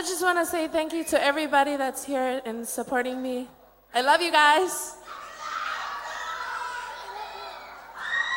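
At 8.02 s the sound changes for the final third of a second, through to the end at 8.36 s. This is a Bluetooth SBC bit pool drop. The link came under pressure, and the sender cut the bits spent on each frame to keep the stream alive. The top sub-bands lose their share, so the treble goes dull. The remaining bands are quantised more coarsely, adding a gritty noise. The change fits a bit pool falling from 31 to 14, around 99 kbps.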